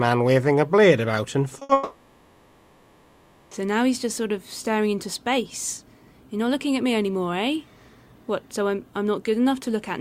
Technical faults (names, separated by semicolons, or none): short concealed packet loss; burst of packet loss; long network dropout